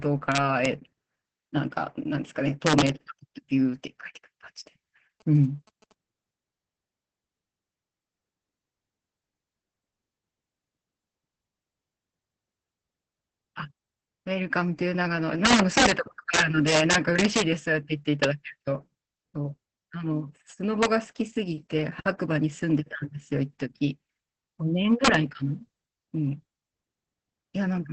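From start to end, the speech carries Opus voice compression. Nothing is present above about 8.6 kHz. The tone is muffled, hoarse and faintly robotic. The coarse, heavily damaged texture points to a low bitrate, around 10 kbps. The band limit fits a wideband SILK setting with 20 ms frames. The linear-prediction coder keeps the outline of the speech. It spends too few bits on the excitation, so the fine detail is lost.

Integer overflow first hits at 0.32–0.65 s, then at 2.67–2.89 s. The louder peaks pushed past the largest number the integer path can hold, by about 1 to 2 dB. Instead of stopping at the limit, the samples wrapped to the opposite sign. Each wrap jumps across the full range. The result is a violent crack, much harsher than clipping would give.

From 5.20 to 5.92 s come GSM signalling bursts. A nearby 2G phone was exchanging short radio bursts with the network. The audio circuit rectified them into sound. 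They form a galloping dit-dit-dit of short 217 Hz buzzes. They sit far below the speech, around 30 dB down.

The integer overflow returns at 15.45–15.91 s and 16.34–17.42 s. These are the strongest, about 5 to 6 dB over the limit. Shorter cracks follow at 18.24 s, 20.83–20.85 s and 25.05–25.15 s.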